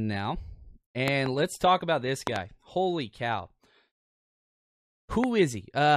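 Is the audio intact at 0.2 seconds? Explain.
Yes, at 0.2 seconds the audio is intact, with no fault of any kind at that moment.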